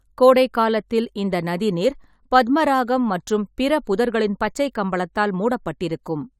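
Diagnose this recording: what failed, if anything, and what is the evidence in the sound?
Nothing in this recording points to a failure at any stage of the chain. Across the whole speech clip there is no audible event that would mark a problem in the wiring, conversion, buffering, transmission, storage or playback.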